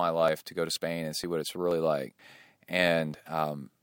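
Audio missing between chunks occurs at 0.28, 0.76 (just after "to go to"), 1.24 (just before "what it's"), 1.71 (just after "what it's"), 2.19 and 2.67 s. Each is a brief skip of about 20 ms, with the speech on either side butted together and no silence between. The half-second spacing likely points to a recorder dropping samples as it hands over between 0.5 s chunks.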